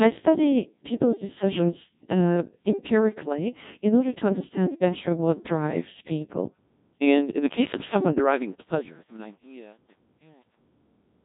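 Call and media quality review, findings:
Codec 2 vocoder throughout. Speech sounds robotic and buzzy, with heavy damage and nothing above 3.8 kHz. Cause: parametric vocoder, consistent with a 1.6 kbit/s mode. The decoder resynthesises the voice from sine waves using only pitch, voicing, energy and envelope, so the waveform is lost.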